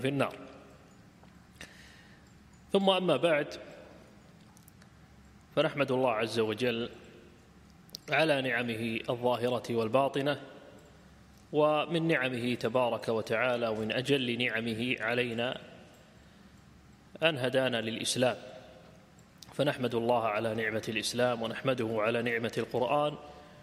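Nothing goes wrong anywhere in this recording; it just carries on steadily with no dropouts, glitches or other technical trouble to point out.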